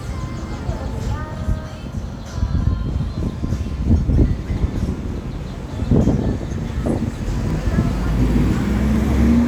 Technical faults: dropped samples

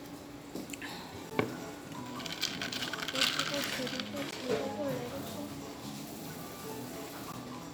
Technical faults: gap between chunks

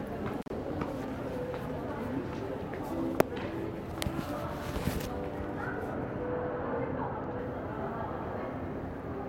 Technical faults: intermittent contact; de-emphasis applied wrongly

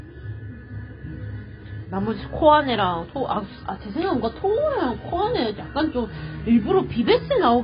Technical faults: AAC compression

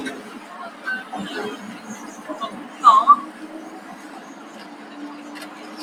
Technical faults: noise suppressor applied to music or sounds

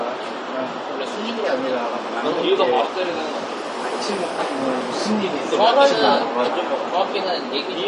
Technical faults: MP3 compression

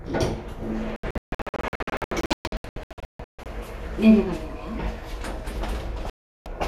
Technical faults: digital broadcast dropout

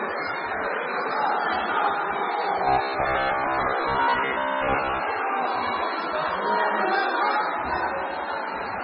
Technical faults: MP3 compression; robotic sound from repeated short buffers

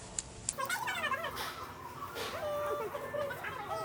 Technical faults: wrong sample rate

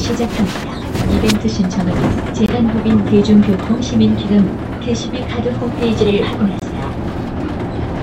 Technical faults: block of digital silence

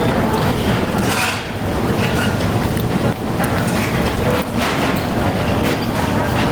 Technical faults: gain pumping

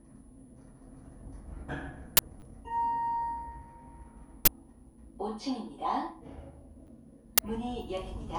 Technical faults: uninitialised buffer; repeated buffer

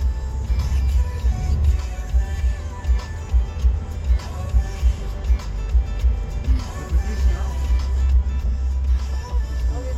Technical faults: none

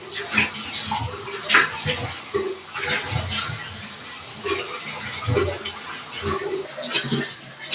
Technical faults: noise suppressor applied to music or sounds; sound cut by the noise suppressor; section at the wrong speed

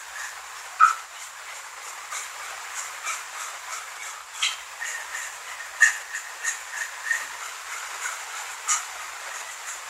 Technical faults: none

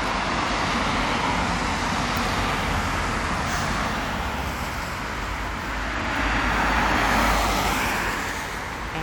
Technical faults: none

